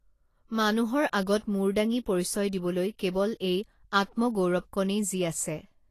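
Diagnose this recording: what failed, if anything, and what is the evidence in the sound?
Codec stage. Throughout, the speech is hissy and grainy, with nothing above 14.2 kHz. This is likely Vorbis compression at a low bitrate, around 34 kbps, coarsely quantising the treble.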